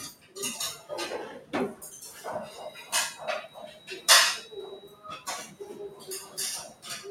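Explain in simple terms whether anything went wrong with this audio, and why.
A noise suppressor designed for speech was left running on this sound, so the noise suppressor was applied to music or sounds it wasn't made for. It treats anything steady or fading as unwanted noise and pulls it down, while sharp onsets mostly pass through. Throughout the clip the level keeps swinging up and down by a clearly audible amount, giving a pumping, unsteady feel instead of a natural, even level.

In six places the sound was cut by the noise suppressor more heavily than elsewhere: around 0.12 to 0.36 s, 3.48 to 3.89 s, 4.81 to 5.05 s, 5.47 to 5.62 s, 5.91 to 6.08 s and 6.68 to 6.85 s. Each is a short dip, about 0.15 to 0.3 s long, where the processor mistook held or decaying sound for noise. The level sinks noticeably.

From 2.59 s to the end, a thin, steady feedback whistle sits well below the main sound at about 3.9 kHz. 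The likely cause is a loudspeaker feeding back into the microphone with the loop balanced right at the edge of howling. It never builds into a full squeal, but that single high frequency keeps ringing on, swelling and fading slowly in level.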